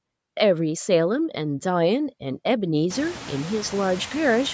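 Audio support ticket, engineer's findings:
Noise suppressor artifacts throughout: background dips between phrases, swells back under speech. Suppressor cutting steady noise about 21 dB per band, frame by frame. Room noise rises around 3 s, settling about 17 dB under speech.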